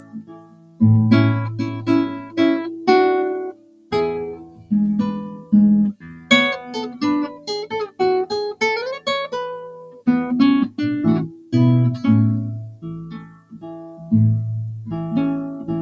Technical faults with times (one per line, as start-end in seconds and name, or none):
0.00-15.82 noise suppressor applied to music or sounds
0.00-0.81 sound cut by the noise suppressor
1.74-2.88 sound cut by the noise suppressor
3.50-4.71 sound cut by the noise suppressor
5.29-8.00 sound cut by the noise suppressor
9.71-10.06 sound cut by the noise suppressor
11.33-11.53 sound cut by the noise suppressor
12.71-14.12 sound cut by the noise suppressor